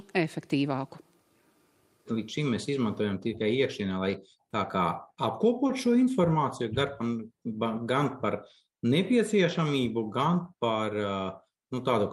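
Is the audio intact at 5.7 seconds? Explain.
No. Short concealed packet loss at 5.67–5.71 s: about 20 ms never arrived, so the decoder extrapolated the preceding sound and blended back, leaving a brief smear.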